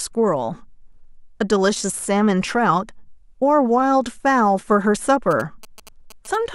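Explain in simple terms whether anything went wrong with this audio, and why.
Near the end, from 5.31 to 6.36 s, GSM signalling bursts appear as a galloping dit-dit-dit of short buzzes at about 217 Hz. A nearby 2G phone was exchanging brief radio bursts with its network, and the audio circuit picked them up as sound. Unlike steady mains hum, these come in uneven clusters.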